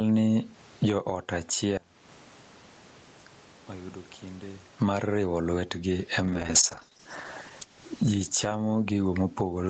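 Throughout the clip the microphone gain is likely set far too high, so a fast limiter clamps down on every loud syllable. Loud and soft parts are pulled closer in level, a gain pumping swing of around 20 dB that leaves the speech squashed and flat in level.

From 1.77 to 4.77 s, one channel has likely been inverted in polarity. When the two channels are summed to mono, the content they share cancels, and the centred speech drops by about 26 dB to a faint residue.

From 6.27 s to the end of the clip, there is a call bitrate drop. The call's bandwidth estimate fell, and the Opus encoder went from 32 kbps down to 9 kbps, staying at that lowest rate for about 2 s. Coding becomes coarse, so the speech turns rough and watery, losing detail even within the 8 kHz band the call path carries.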